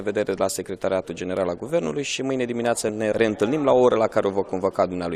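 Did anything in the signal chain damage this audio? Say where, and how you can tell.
No, no damage detected.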